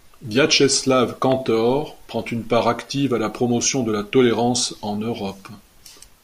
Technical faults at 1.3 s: loud pop

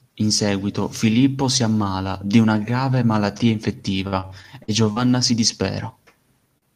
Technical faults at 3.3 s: none

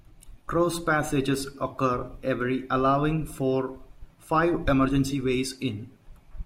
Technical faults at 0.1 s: none

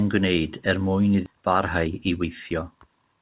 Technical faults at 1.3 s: skip ahead; jitter buffer speed-up

